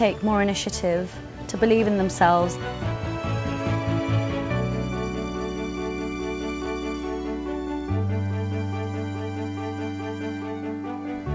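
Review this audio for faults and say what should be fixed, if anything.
At 6.66 s there is a dropped buffer (overrun), most likely because the capture program failed to collect its samples before the hardware overwrote them. A few milliseconds of sound are lost and the two sides join directly, producing a small forward jump instead of a gap. The absence of anything above 8 kHz fits the G.722 call path the audio travelled through. To prevent the overrun, raise the capture thread's priority or enlarge its input buffer so it always reads the hardware in time.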